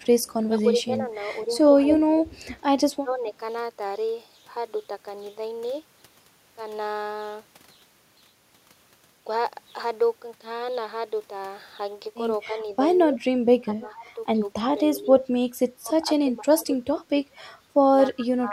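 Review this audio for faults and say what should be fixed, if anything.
Speech suppressed in double talk: the speech dips and drops out in pieces at 0.03–2.27 s (about 10 dB), 2.94–3.25 s (about 25 dB) and from 12.47 s to the end (about 30 dB), likely because the echo canceller turned down its own talker along with the loudspeaker echo while they overlapped.

Echo leak: a delayed copy of the speech returns at 0.24–0.33 s (234 ms late, very faint), 1.91–3.14 s (264 ms, strong) and 14.95–15.0 s (292 ms), likely loudspeaker pickup the far-end echo canceller didn't remove.

Preventing both means a better-tuned echo canceller with proper double-talk handling, or a headset instead of a loudspeaker at the far end.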